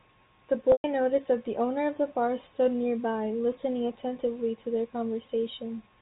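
A brief buzzy, held sound at 0.72 s fades to silence before the speech returns with a short cross-fade at 0.84 s. This is packet loss with pitch repetition: about 120 ms of the G.711 stream dropped out, and the receiver looped the last pitch period before fading it away.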